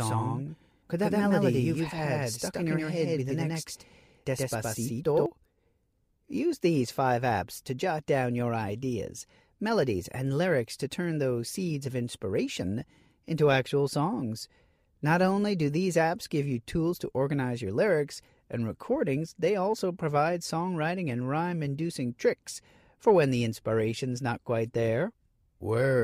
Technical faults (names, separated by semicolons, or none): doubled audio track